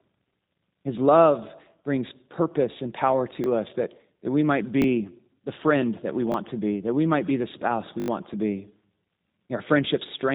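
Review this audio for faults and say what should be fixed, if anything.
The whole clip passes through the G.729 codec at 8 kbit/s. Nothing above 3.8 kHz survives, and the pulse-coded rebuild makes the speech plainly rough and synthetic. Use a wideband codec such as G.722 or Opus wherever the link allows it.

There are repeated buffers at 3.44 s after "brings purpose and power", at 4.82 s, and at 6.32 s after "the friend that we". Each one replays a short piece once with a hard join, which fits a 20 ms buffer. At 8.0 to 8.08 s, after "might be the spouse", the piece plays four extra times and gives a brief buzz, and about 70 ms of audio is lost. A larger jitter buffer or better thread scheduling would stop the device from running out of fresh audio.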